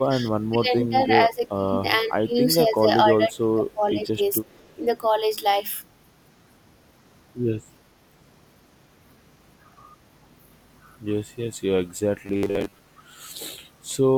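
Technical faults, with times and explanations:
0.0–1.8 s, 2.05–2.36 s, 2.59–4.22 s and 4.39–4.45 s, speech suppressed in double talk: the speech dips by about 20 dB in bursts, likely because an echo canceller confused the talker with loudspeaker echo while both sides spoke and attenuated everything together.
4.45–4.75 s, echo leak: a faint delayed copy of the speech, about 35 dB below it, arrives 462 ms late, likely because a loudspeaker-side echo canceller let part of its microphone pickup through and sent it back down the line.
12.26–12.78 s, robotic sound from repeated short buffers: the speech becomes a stiff metallic buzz at 100 Hz, with most of this stretch made of repeats. It likely comes from 10 ms chunks being replayed while late audio is skipped.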